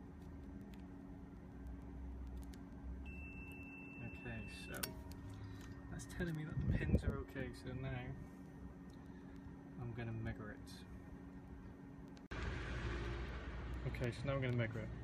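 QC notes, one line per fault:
0.16–14.95 s, word clock ticks: sharp ticks of uneven strength recur at a steady rate, about one every 0.15 s, roughly a hundred in all. The receiving device runs on its own clock, not locked to the sender's, with a mismatch of around 150 ppm. Each slip misreads a few samples and drops or repeats a single one. On a spectrogram each tick is a thin full-band vertical line at even spacing. In the waveform each shows as a one-sample discontinuity.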